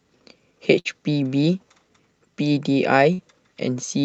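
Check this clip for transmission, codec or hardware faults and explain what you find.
Two short bursts of packet loss stand out in this speech, at 0.79 to 0.88 s and again at 3.13 to 3.21 s. The call codec path, with its top end cut off near 8 kHz, is heard throughout.

Each burst is a run of packets that never arrived in time. The receiver bridged the hole by extending the last received sound for about 55 ms and letting it fade, producing a brief held buzz or hiss. Speech then picks up roughly 60 ms further along, with that stretch gone. The synthetic, fading fill, rather than dead silence or a hard click, marks this as loss concealment and not a plain dropout or edit.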